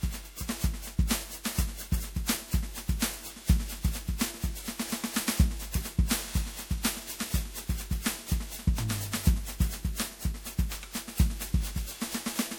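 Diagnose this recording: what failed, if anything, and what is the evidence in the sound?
Codec stage: likely repeated MP3 re-encoding at 96 kbit/s, roughly ten passes, causing generation loss. The music sounds swirly, hollow and smeared throughout, with blurred attacks.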